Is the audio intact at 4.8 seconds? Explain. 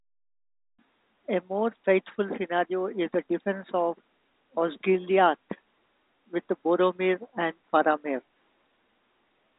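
Yes, at 4.8 seconds the speech is intact, carried by ordinary telephone-band coding with nothing above about 4 kHz and no break or distortion at that moment.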